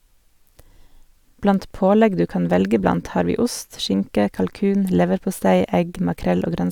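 No technical faults can be heard in the speech recording. Nothing in it calls for a timestamp or further comment.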